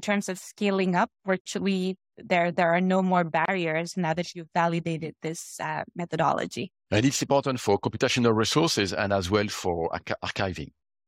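Two stream segments were stitched with a timestamp hole between them, so the player padded it with silence: a gap between stream segments. The speech drops out with hard edges for about 51 ms from 1.41 to 1.46 s, then again for about 29 ms from 3.45 to 3.48 s. Nothing is lost, only delayed.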